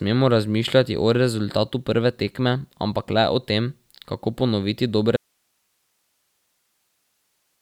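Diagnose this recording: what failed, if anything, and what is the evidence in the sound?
At 5.17 s the speech drops out abruptly and never comes back; everything after that to the end is just a low hiss, roughly 50 dB below where the signal was sitting. That's an audio dropout to a faint residue: the source vanished but the path stayed live, so you're hearing the open input's noise floor. With hiss rather than silence, it's likely an analogue wiring fault, a cable or connector letting go mid-take.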